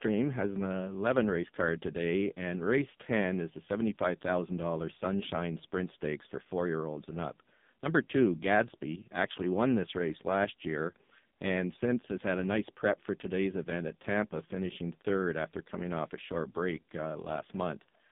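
From start to finish, the speech has been through the AMR narrowband mobile codec, and heavily. Nothing survives above 3.7 kHz or below 150 Hz, and the vocal-tract model, fed only a few pulses per 5 ms subframe, leaves the voice buzzy and synthetic, which fits a low AMR-NB rate, around 5.15 kbps. On a spectrogram, energy stops flat at 3.7 kHz, with smeared, blocky harmonics in 20 ms steps.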